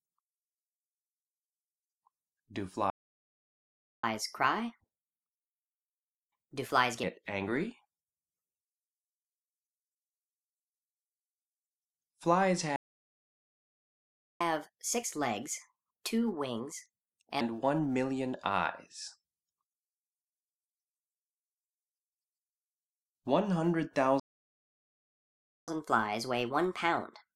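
The audio halts three times in a playback stall: silence from 2.9 to 4.04 s, 12.76 to 14.41 s and 24.2 to 25.68 s, lasting 1.13, 1.64 and 1.48 s. The likely cause is the player running dry or its thread being blocked. Each stall is followed by catch-up at higher speed, running 1.25 times faster, at 4.04 to 7.04 s, 14.41 to 17.41 s and from 25.68 s to the end. Pitch rises by about four semitones along with tempo. That linked rise sets it apart from a steady pitch or speed error.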